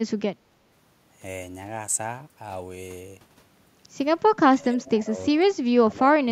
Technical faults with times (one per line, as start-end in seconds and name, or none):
0.50-0.57 speech suppressed in double talk
4.48-6.32 speech suppressed in double talk